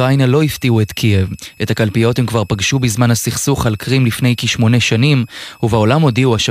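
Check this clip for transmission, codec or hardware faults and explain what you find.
There's one hardware fault here, running under the speech from start to finish: a switching supply whistle. A thin, high tone sits between about 2.5 and 2.6 kHz, and its pitch wanders within that band rather than holding steady. It's quiet, roughly 35 dB below the speech, but it's there the whole way through. A switching power supply somewhere in the chain is dropping into an audible burst mode or beating against another supply, and that whistle leaks into the audio path.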